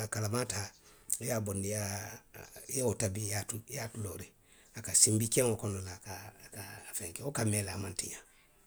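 No technical faults can be heard anywhere in the recording.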